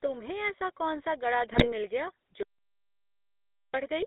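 From start to finish the speech carries GSM full-rate codec damage, plainly audible, with the buzzy, gravelly texture this codec is known for. Its encoder fits a vocal-tract filter to each stretch of sound and excites it with a regular pulse train that keeps only one excitation sample in three, which fits the 13 kbps full-rate scheme. The line band runs from about 250 Hz to 3.7 kHz, so there is no low end and no air above that.

Between 1.52 and 1.73 s, GSM bit errors break up the signal. Corrupted bits reached the decoder and scrambled the filter, pitch and gain parameters, so the spectrum is bent and the level jumps for those frames. The result is a short burst of squawking, popping and gargling. Five frames were hit, at an error rate consistent with roughly 2.35 percent of bits flipped.

At 2.43 s the audio drops out to silence and stays out until 3.74 s, a gap of about 1.31 s. It is plain silence, with no room tone or noise floor, so whatever was being said in that stretch is gone. 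The most likely cause is that the input stream was lost while the encoder kept writing silence. The sound then resumes abruptly in mid-flow.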